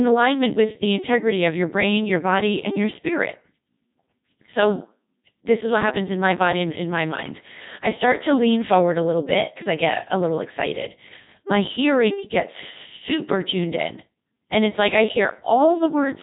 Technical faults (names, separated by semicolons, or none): Codec 2 vocoder